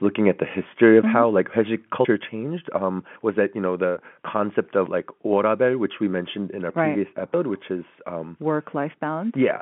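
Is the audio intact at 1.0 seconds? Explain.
No. Right after "looking at the", from 0.83 to 0.97 s, there is microphone overload. The loudest peaks push about 2 dB past the converter's ceiling, and their tops are sliced flat. Only a small share of the waveform is cut. It still adds a harsh, crackly edge to that syllable. The likely cause is an input volume set too high.

At 1.02 s comes a microphone volume step-down. The whole level, background included, drops by about 4 dB in one abrupt step. It lands just after the distorted peak. That timing points to the call software likely reacting to the clipping by lowering the input gain. The drop stays audible through the narrow telephone band, which stops near 3.8 kHz.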